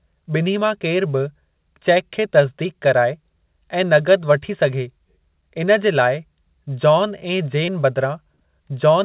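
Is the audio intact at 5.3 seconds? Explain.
Yes, the speech at 5.3 s is intact, carried through the call path's narrowband G.711 coding with nothing above 4 kHz and no dropout, glitch or other fault at that moment.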